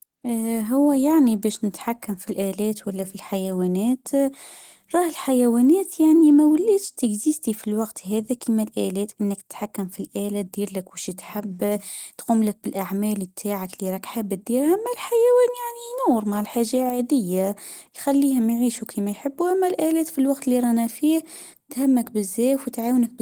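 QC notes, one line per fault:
Throughout, Opus voice compression: coarse, slightly hoarse and robotic speech, with a thin, grainy top band rather than a dull cut-off, consistent with roughly 16 kbps hybrid coding.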